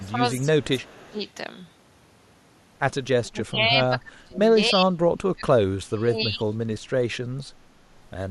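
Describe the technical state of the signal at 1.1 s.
At 1.1 s the echo canceller has likely lost track while both ends talk at once. It cannot separate this talker from the loudspeaker echo, so it turns everything down. This is speech suppressed in double talk, running from 0.41 to 1.21 s. The voice dips by about 20 dB at its deepest and is held down for most of that stretch.

Inside that window, from 1.07 to 1.13 s, there is also an echo leak, likely from a loudspeaker whose canceller let part of the microphone pickup through and sent it back. A brief scrap of the voice returns 290 ms late, very faint, roughly 35 dB below the speech.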